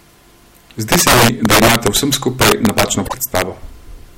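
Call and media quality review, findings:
Integer overflow, 0.92–2.83 s: violent cracks on loud speech peaks. Mixer or gain stage driven about 9 dB past the integer limit, wrapping to the opposite sign instead of saturating.

Integer overflow again, 3.35–3.42 s: brief crack burst, about 5 dB over. Unlike clipping, peaks flip polarity rather than flatten, so the result is sharper and harsher than buzzy squaring.

Frames out of order, 3.05–3.14 s: garbled flutter. Two adjacent runs of about 26 ms each arrived swapped and were decoded in that order, which fits single codec frames. Unlike a dropout or concealment, nothing is missing. Short halves play exchanged and timing stays intact.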